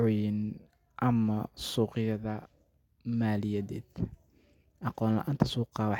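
Speech, with nothing technically wrong in it.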